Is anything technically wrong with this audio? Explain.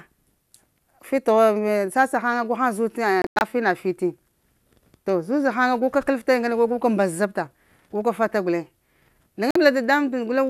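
Yes. This speech has two digital broadcast dropouts, where the receiver muted after failing to decode frames. The first, from 3.22 to 3.42 s, breaks into several short holes totalling 144 ms, the longest about 96 ms. The second, from 9.51 to 9.56 s, loses 48 ms. Both show as abrupt blank vertical bands across the spectrogram and flat lines in the waveform, with the lost sound not recovered.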